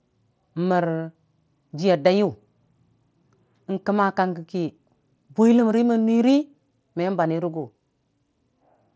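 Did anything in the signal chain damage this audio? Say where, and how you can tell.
No, nothing in the signal chain damaged this audio: the call microphone processing and the Bluetooth mSBC headset link both behave as those stages normally do, with nothing heard above 8 kHz.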